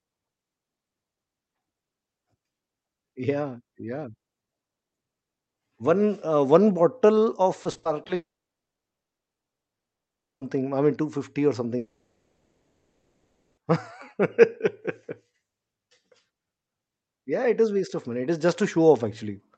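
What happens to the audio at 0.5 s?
Nothing goes wrong at 0.5 s: the speech passes through intact, carrying only the ordinary coding character of the call path, whose bandwidth stops at 8 kHz.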